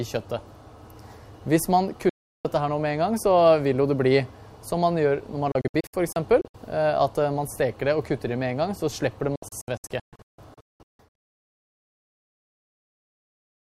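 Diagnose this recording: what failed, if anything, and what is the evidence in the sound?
A digital broadcast dropout at the reception and decoding stage: the receiver muted with fast 3 ms fades, once solidly from 2.09 to 2.45 s, then in scattered short holes from 5.52 to 6.55 s and 9.36 to 11.28 s (longest 0.19 s). Clean silences, not crackle or concealment smear, distinguish it from wiring faults or packet-loss repair.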